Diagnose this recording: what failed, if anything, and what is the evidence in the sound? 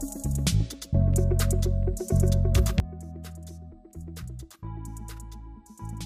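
At 2.80 s the level drops by about 15 dB in a single step and stays down to the end, with the background noise falling right along with the sound. That's a sudden gain jump, likely a digital gain setting in the processing chain applied with no ramp.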